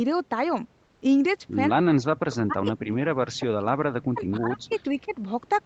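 Speech band-limited at 8 kHz by its call path carries three kinds of fault. From 0.85 to 1.01 s, comfort noise replaces the background: for 160 ms the real room noise gives way to a steady, featureless hiss about 4 dB quieter. The cause is likely Opus discontinuous transmission, where the sender paused and the receiver synthesised filler. On a spectrogram this shows as a smooth, uniform noise floor with none of the fine texture on either side. Speech suppressed in double talk occurs four times: 1.72–2.08 s, 2.44–3.47 s, 3.79–4.73 s and 4.90–5.13 s. The voice dips, falling by roughly 40 dB at its deepest in the first three and by about 15 dB in the last. The likely cause is an echo canceller that could not separate near-end speech from loudspeaker echo and turned both down. The waveform envelope collapses in chunks, and the spectrogram shows harmonics fading or vanishing in patches. An echo leak is heard at 2.17–2.36 s, 4.02–4.20 s and 4.57–4.89 s as a faint, delayed copy of the voice. 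It trails by 179, 184 and 186 ms and sits roughly 20 to 25 dB below the speech, likely residual loudspeaker pickup the canceller missed. On a spectrogram it appears as a weak repeat of the harmonic pattern shifted about 0.18 s later.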